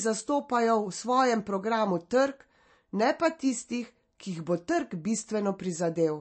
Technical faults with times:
0.00-6.20 MP3 compression

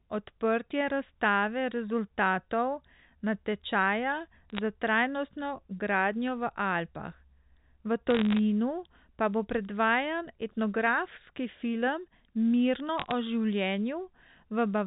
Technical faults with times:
4.50-4.59 bit errors on a digital phone line
8.10-8.39 bit errors on a digital phone line
12.98-13.11 bit errors on a digital phone line

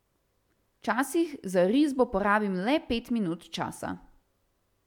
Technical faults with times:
none

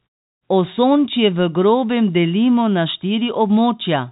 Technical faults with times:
none

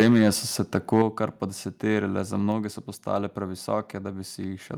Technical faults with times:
0.00-0.30 microphone overload
0.02 microphone volume stepped down
0.75-1.02 microphone overload
1.02 microphone volume stepped down
2.52 microphone volume stepped down

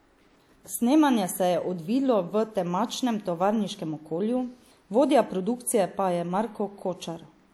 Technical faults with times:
0.77-6.83 clock drift buffer slips

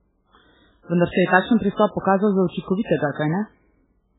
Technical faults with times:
0.00-4.19 MP3 compression

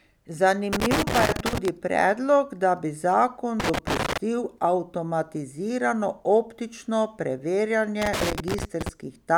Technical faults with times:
0.73-1.68 loose connector crackle
3.60-4.18 loose connector crackle
8.02-8.89 loose connector crackle

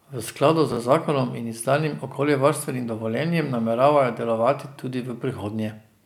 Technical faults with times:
0.72-0.77 chunks out of order

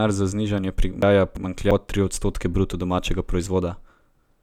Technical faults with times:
1.02-1.71 chunks out of order

